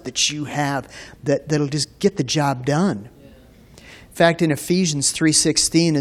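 Damaged data in a compressed stream hits the speech at 1.82 to 1.85 s, between "you have that that'll" and "get the job done". Corrupted bytes make the decoder misread those frames and lose sync while it hunts for the next header, producing a brief glitch.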